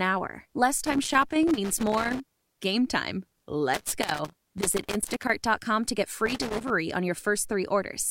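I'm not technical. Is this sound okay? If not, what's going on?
No. Three bursts of scratchy, irregular crackling break into the speech, from about 0.84 to 2.63 s, 3.74 to 5.30 s and 6.26 to 6.70 s. This is loose connector crackle: a worn or dirty plug keeps losing and regaining contact, chopping the signal into pops.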